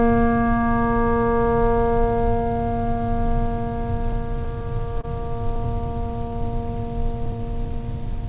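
A short music clip, band-limited with nothing above 4 kHz, consistent with a G.711 mu-law call at 64 kbps, and its tempo never quite settles. From 0.01 s to 8.19 s the music drags slightly and unevenly, with faint hiccups at irregular spacing, as if played at 98% speed. These are repeated timing corrections: the receiver keeps repeating tiny slices, adding roughly a fifth of a second in total. The underlying cause is clock drift between sender and receiver, with the sender's clock running about 2% slow. The receiver's jitter buffer keeps draining, and every top-up is another small repeat, so the hiccups recur all through the clip. At 5.01 to 5.05 s one sound is briefly held too long, a 22 ms freeze before the music resumes where it left off. That short stall from a late packet comes from the jitter buffer running empty. The receiver stretched the last sound until the packet arrived, so nothing is missing, but playback runs 22 ms later from then on.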